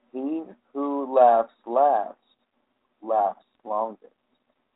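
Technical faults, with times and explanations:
3.55 s: bit errors on an ADPCM link. A brief pop followed by a rough, uneven burst, the kind a bit error rate of a few tenths of a percent produces. Each flipped bit knocks the decoder's step size and predictor off track, so the damage rings on for a few milliseconds, which fits a few codec frames being hit. On the waveform it shows as a sharp spike with a short, jagged amplitude wobble; on a spectrogram, a thin vertical broadband streak reaching the top of the narrowband telephone range. The surrounding G.726 coding, which fits 32 kbit/s, carries only light codec roughness.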